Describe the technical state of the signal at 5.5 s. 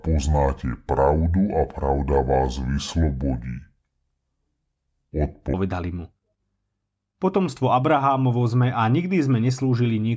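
At 5.5 s we're right at the tail of a wrong sample rate stretch (0 to 5.54 s). The speech runs at two-thirds speed and about 7 semitones low, which fits 24 kHz audio played back at 16 kHz.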